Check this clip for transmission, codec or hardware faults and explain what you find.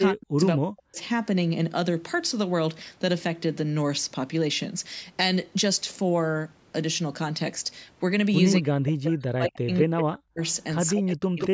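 Two call-path faults appear in the speech.

Speech suppressed in double talk, 0.1–0.98 s, 8.6–10.41 s and 10.96–11.53 s: the echo canceller likely mistook overlapping talk for echo, so the voice dips by up to roughly 40 dB.

Echo leak, 9.75–10.18 s and 10.86–11.48 s: a copy of the voice returns 183 ms late at about 10 dB below it, likely loudspeaker pickup that the far-end canceller missed.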